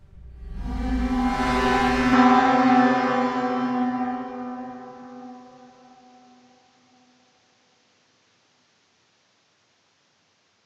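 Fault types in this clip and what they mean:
Input switched to a poorer device: from 2.13 s the sound abruptly narrows, with nothing above 7.6 kHz, a level shift of roughly 5 dB, and a new, faint noise floor far below the signal, with no gap at the change. This is likely a mid-recording change of input device.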